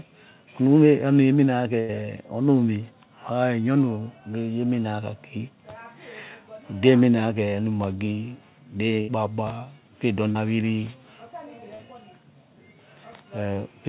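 At 1.80 s the speech breaks in a burst of packet loss lasting until 1.92 s. Several packets in a row arrived too late or not at all. The receiver stretched the last sound for about 86 ms and let it fade. When the speech returns, about 80 ms of it is gone. The same thing happens from 9.01 to 9.11 s. This time about 72 ms is filled in and about 80 ms is lost.

Two shorter gaps follow, each a short concealed packet loss. The first runs from 10.32 to 10.38 s, and the second from 11.75 to 11.82 s. Each time about 40 ms never reached the decoder in time. The receiver bridged the hole by continuing the last sound, about 32 ms the first time and 40 ms the second, then blended back into real audio. Each gap is heard as a brief smear or wobble. Both sit on a call path with nothing above 4 kHz, which fits narrowband G.711.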